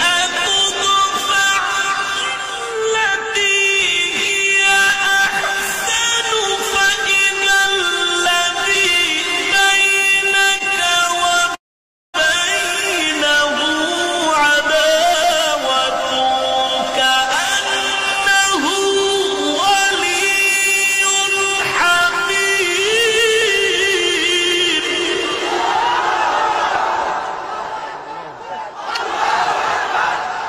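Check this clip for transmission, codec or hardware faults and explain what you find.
Four kinds of fault are audible: brief concealed packet gaps, a freeze, two dropped-buffer skips and a stretch of jitter-buffer speed-up.

Between 10.51 and 11.11 s there are scattered short gaps: about three small holes, the longest around 15 ms, together only about 30 ms. Each lost or late packet was patched by extending the preceding sound, so the audio stays clear but picks up tiny ticks and smears. A spectrogram shows brief vertical seams where the texture repeats rather than changes, and the waveform shows faintly repeated cycles.

From 11.55 to 12.16 s the audio freezes for 589 ms. This is the call audio freeze, likely caused by packets stalling so that the jitter buffer ran dry. The last sound continues briefly as a fading buzz, then goes silent for about 540 ms. When the audio resumes, it continues where it stopped, so nothing is lost but everything after it is 589 ms later. 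A spectrogram shows a smeared tail decaying into a blank band, and the waveform shows a flat stretch.

At 15.24 s there is a sudden jump in the sound, a dropped buffer (overrun) in which roughly 10 ms was skipped, probably because the hardware overwrote samples before they were read. A smaller one at 23.42 s loses about 5 ms. There is no silence at either point, only a splice. The waveform shows a discontinuity, and a spectrogram shows a thin full-height vertical line.

From 15.36 to 23.07 s the audio runs about 3% fast at unchanged pitch. This is jitter buffer speed-up: the receiver trimmed a backlog, roughly 200 ms in total, by cutting out short pitch-period pieces many times over. On a spectrogram, events sit closer together while harmonic spacing stays the same, and the waveform shows periodic cycles quietly removed.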